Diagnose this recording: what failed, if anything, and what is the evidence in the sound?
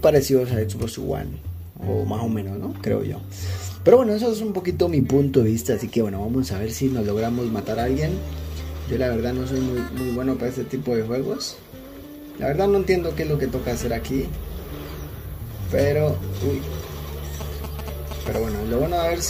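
A galloping dit-dit-dit of short buzzes at about 217 Hz runs from 17.41 to 18.37 s, roughly 10 dB below the sound. These are GSM signalling bursts: a nearby 2G phone's radio pulses get rectified in the analogue wiring and demodulated into audible interference.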